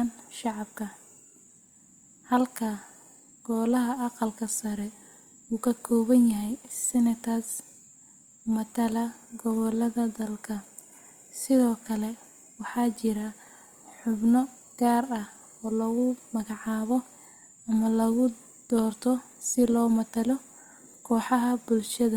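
Throughout the speech, the sound carries plainly audible Opus compression damage, likely from the CELT music mode at a rate that fits about 24 kbps. Bandwidth stays full, reaching 20.2 kHz, but starved bands are filled by folding and noise, leaving the voice rough and grainy.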